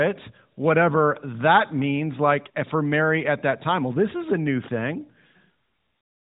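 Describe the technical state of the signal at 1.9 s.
At 1.9 s the speech is intact with no fault, carrying only the normal band limit of the AMR narrowband mobile codec path, which passes nothing above about 3.8 kHz.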